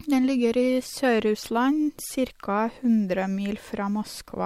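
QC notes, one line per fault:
Nothing to flag on this speech clip; I didn't hear any faults anywhere in it.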